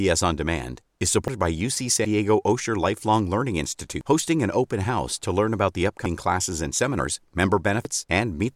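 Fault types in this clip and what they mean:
Dropped buffer (overrun): roughly a tenth of a second goes missing six times, so the speech jumps ahead, likely from unread buffers being overwritten; the waveform shows abrupt splices without gaps.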